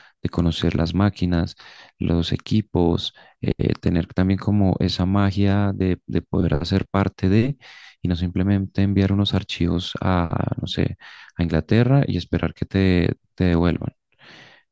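No technical faults can be heard anywhere in the speech. Nothing in the recording calls for a timestamp or a repair.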